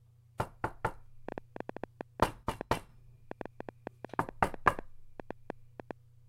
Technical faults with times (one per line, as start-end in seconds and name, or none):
1.29-5.92 train of clicks